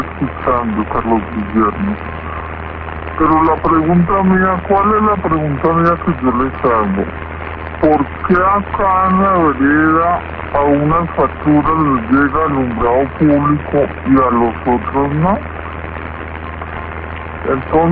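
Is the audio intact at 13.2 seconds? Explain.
No. At 13.2 seconds, as everywhere else in the clip, the audio shows a wrong sample rate fault. The samples are being clocked out slower than they were captured, with no rate conversion, so everything runs at about two-thirds speed and sits roughly 7 semitones low. Timing and pitch drop together by the same ratio, which fits material recorded at 24 kHz being played back at 16 kHz.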